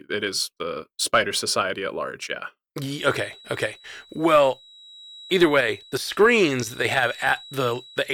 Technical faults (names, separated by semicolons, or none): feedback whistle